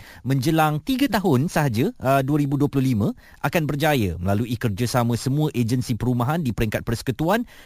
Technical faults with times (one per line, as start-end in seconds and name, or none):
0.00-7.66 imaging from sample-and-hold upsampling